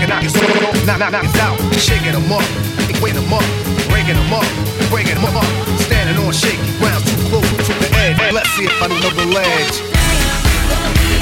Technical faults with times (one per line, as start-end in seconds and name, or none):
2.89-3.08 frames out of order
5.16-5.36 frames out of order
7.51-7.71 frames out of order
8.90-9.10 frames out of order